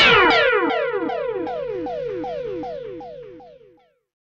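From 1.70 s to the end, a Bluetooth SBC bit pool drop dulls the treble and adds gritty noise, consistent with a bit pool cut from 28 to 10, near 84 kbps.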